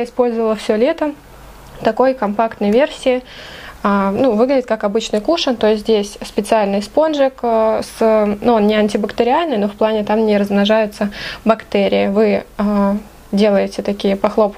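Nothing technically wrong turns up anywhere in this audio, so there are no times or causes to point to.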